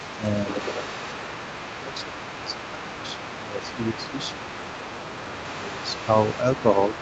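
Throughout the whole speech clip, a second, fainter voice sits roughly 15 dB below the talker, most likely the other side's voice leaking through from an incompletely cancelled loudspeaker echo; on a spectrogram it shows as overlapping harmonic traces. Speech suppressed in double talk follows, likely from the canceller ducking both voices at once: brief dips at 0.18–0.23 s and 6.38–6.48 s, and a deeper, longer one of around 15 dB from 1.67 to 4.43 s, plus 5.23–5.86 s. These appear as sagging, gappy envelopes on the waveform and thinned, faded bands on the spectrogram. The spectrum stops at 8 kHz, which fits the call path's wideband coding.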